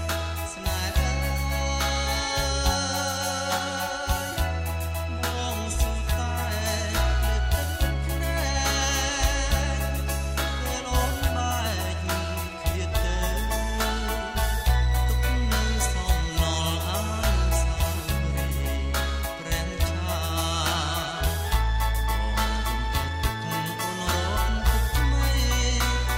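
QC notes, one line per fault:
No audible faults detected anywhere in the clip.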